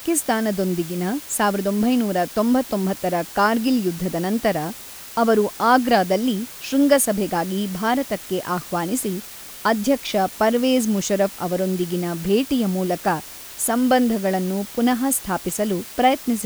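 A constant, even hiss sits under the speech from start to finish, at roughly 20 dB below the signal, with no distortion. This is low bit depth with dither: only 6 bits were used, and dither turned the rounding error into steady white noise.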